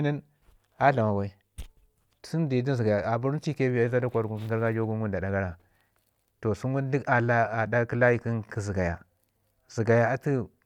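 No technical faults are audible.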